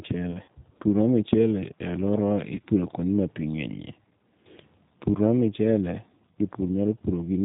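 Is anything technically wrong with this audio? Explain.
Yes, there are two faults: low-bitrate speech coding throughout, and two dropouts that the decoder papered over.

The whole clip carries G.729 codec damage, plainly audible, with a sound that fits the 8 kbit/s G.729A variant. Each short frame is rebuilt from a vocal tract filter, a pitch predictor and a few pulses instead of the original waveform. The result is speech with nothing above 4 kHz, a dull, band-limited top end, and a slightly rough, synthetic texture to every voiced sound.

VoIP packet loss concealed by the speech codec occurs twice. From 0.32 to 0.49 s, about 60 ms of audio is missing in scattered gaps over 160 ms, with the longest gap 40 ms, which points to three lost packets. At 2.56 to 2.60 s, between "michele e aluorawa" and "kuonde ma pi nge'nyie", about 20 ms is missing, consistent with one packet. In each gap the decoder extends its last pitch and filter at falling gain, so the sound smears into a fading buzzy tone or coloured noise. 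Because each frame builds on the previous one, the speech stays weak and distorted briefly after the gap ends.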